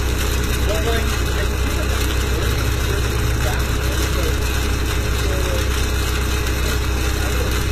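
Throughout, the treble has a gritty, metallic sheen, likely from HE-AAC compression at a rate that fits roughly 20 kbps, where upper bands are copied from lower ones rather than coded. A spectrogram shows smeared, blocky high-frequency texture and nothing above 14.9 kHz.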